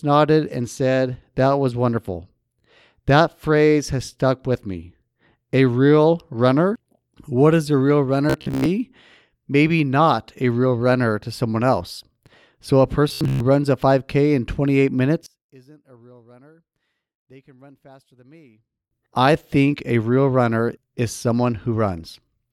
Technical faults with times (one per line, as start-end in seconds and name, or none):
8.30-8.66 robotic sound from repeated short buffers
13.09-13.40 robotic sound from repeated short buffers
15.26-18.91 one channel inverted